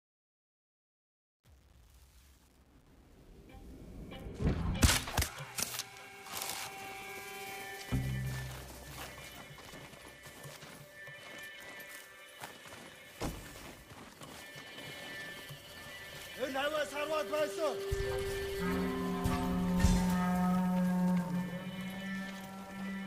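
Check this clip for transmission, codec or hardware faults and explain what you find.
A level stage that processed the fade-in at the start kept too few bits and added no dither, which fits a resolution of about 9 bits. This causes truncation distortion on the fade from 0.0 to 4.15 s. The quiet waveform collapses into coarse square steps, so the opening through about 4.0 s sounds gritty before the fade-in finishes at 4.15 s.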